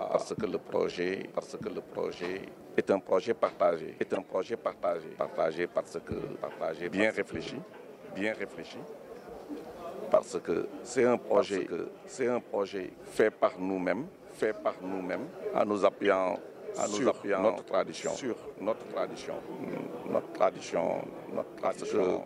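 A second capture path or misaligned edit has likely mixed in a doubled audio track: throughout, a dry, full-band copy trails about one and a half seconds behind, roughly 5 dB quieter. Damaged data in the compressed stream makes the decoder lose sync, producing brief glitches from 4.15 to 4.17 s and from 16.05 to 16.07 s.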